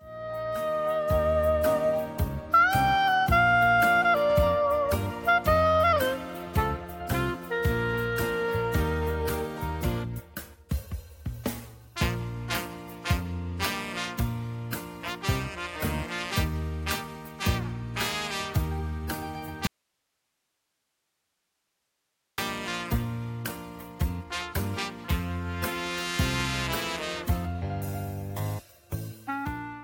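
At 19.67 s the sound cuts out abruptly. This is an audio dropout to a faint residue. For about 2.7 s only hiss remains, roughly 50 dB below the signal. The likely cause is a lost signal with a still-live path. It returns suddenly at 22.38 s.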